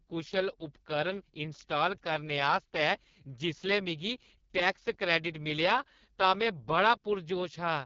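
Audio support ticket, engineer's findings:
Rough, raspy speech for the whole clip, with nothing above about 7.2 kHz. Points to the AMR wideband (HD Voice) codec at its lowest mode, around 6.6 kbit/s, where too few bits for the pulse-driven vocal tract model leave the voice grainy.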